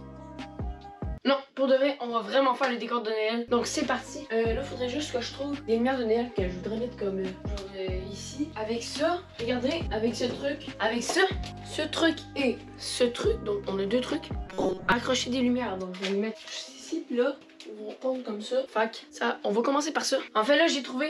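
From 14.46 to 14.92 s there's a robotic sound, a stiff metallic buzz pinned at 188 Hz. It's likely repeated short buffers: audio arriving too slowly, so a roughly 5 ms chunk gets looped through most of that stretch while the real material is skipped.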